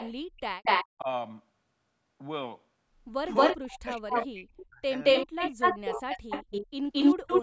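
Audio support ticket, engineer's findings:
Echo leak: delayed second copy of the speech trailing the talker by about 0.22 s, 0.0–0.86 s and again 3.32–7.42 s, roughly 10 dB down. Likely far-end echo canceller on loudspeaker playback not fully cancelling its mic pickup, residual returned to us.

Background gated by the echo canceller: room tone dips sharply, about 32 dB at deepest, 0.26–0.4 s, roughly 150 ms total, then recovers. Echo canceller clamping mic gain while its loudspeaker played, releasing once playback eased.

Speech suppressed in double talk: talker's voice ducks or breaks up at 0.98–1.08 s (about 10 dB), 3.73–4.85 s (about 40 dB), 5.52–6.31 s (about 35 dB), 7.14–7.28 s (about 40 dB). Likely canceller unable to separate near talker from echo during overlap, attenuating both.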